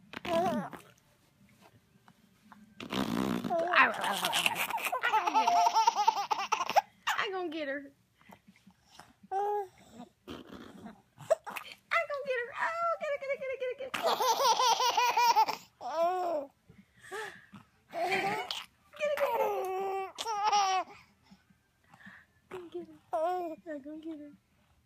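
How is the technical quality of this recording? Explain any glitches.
One fault stands out: loudspeaker feedback squeal from 5.26 to 5.89 s. A microphone picked up the loudspeaker it was feeding, and near 702 Hz the loop gain passed one. That tone swelled over roughly a third of a second into a steady squeal, peaking about 5 dB above the surrounding sound before it ended.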